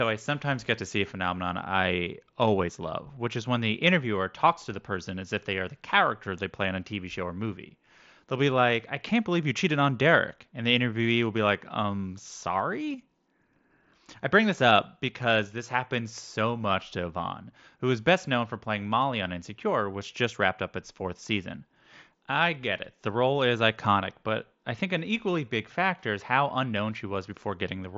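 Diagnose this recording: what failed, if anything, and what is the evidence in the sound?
Nothing failed: the speech arrives band-limited to about 7.7 kHz, consistent with a Bluetooth headset link running the mSBC wideband codec as designed.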